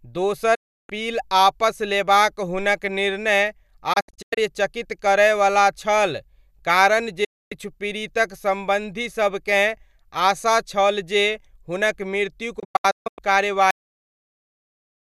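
Right at 0.55 s the speech hits a digital broadcast dropout: the receiver mutes with a quick 8 ms fade until 0.90 s, then comes back. It repeats at 3.93–4.38 s as scattered short holes, at 7.24–7.52 s just after "करयवला छल कारण", and at 12.59–13.19 s as broken holes up to 144 ms long. Whatever was sent during those gaps is simply gone.

Then at 13.71 s there's a cut-off end. The audio stops dead mid-sound and drops straight to digital silence with no decay, because the final stretch of audio was never written out or played.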